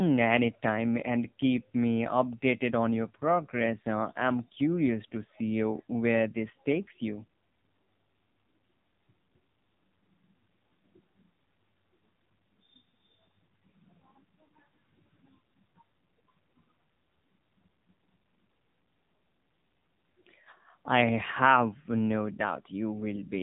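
The speech has passed through the AMR narrowband mobile codec for its whole length, with heavy damage that points to a low mode around 6.7 kbps. Nothing above about 3.8 kHz survives, and the sparse pulse-driven vocal model leaves the voice buzzy, thin and synthetic.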